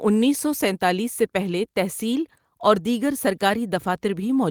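Listening to this short speech recording, nothing technical stood out.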